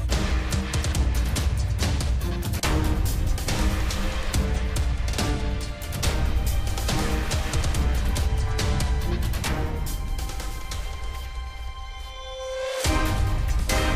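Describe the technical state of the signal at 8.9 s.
At 8.9 s the signal is intact, with no audible fault at that moment.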